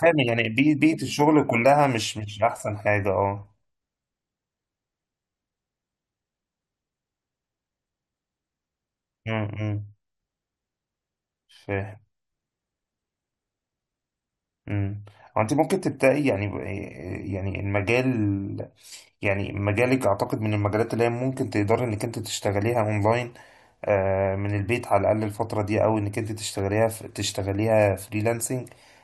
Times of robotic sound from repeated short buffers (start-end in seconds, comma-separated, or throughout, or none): none